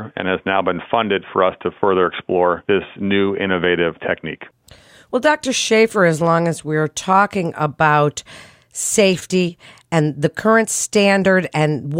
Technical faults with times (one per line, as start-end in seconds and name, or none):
none